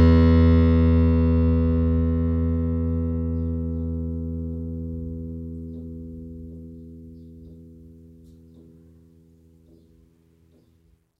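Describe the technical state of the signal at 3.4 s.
At 3.4 s the music plays through intact, with no dropout, click, distortion or other fault in the signal.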